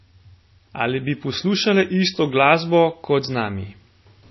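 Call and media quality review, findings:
Speech dull and band-limited throughout, nothing above 5.8 kHz. Watery, swirly sibilants; smeared onsets. Likely MP3 compression: bit-starved encoder cuts treble at a fixed frequency, zeroes weak lines frame to frame. Fits a bitrate near 24 kbps.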